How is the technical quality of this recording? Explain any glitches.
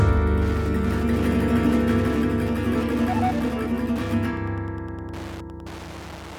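The recording is marred by one fault that runs from start to finish: Wi-Fi interference. A Wi-Fi radio sitting near the audio circuitry sends a beacon every 102.4 ms. The circuit rectifies each radio burst into a small audible pulse, producing a steady ticking just under ten times a second, roughly 20 dB below the wanted sound. Its strict clock-like regularity separates it from random crackle, and its slow tick rate separates it from continuous mains hum.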